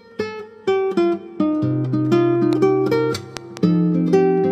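A sharp loud pop lands between 2.53 and 2.55 s, standing around 10 dB above the sound, which carries on beneath it. A second, stronger disturbance follows from 3.37 to 3.59 s as two pops in quick succession, peaking roughly 15 dB over the sound. The likely cause is a sudden voltage step or pulse entering the signal path, such as from a plug, switch, static discharge or driver glitch, which later circuits shape into a brief thump.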